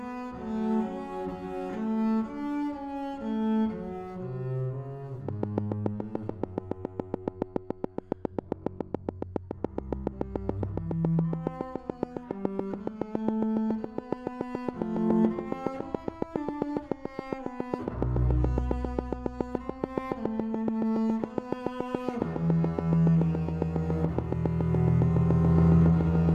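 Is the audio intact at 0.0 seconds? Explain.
Yes, the audio is intact at 0.0 seconds, with no fault to be heard at that moment.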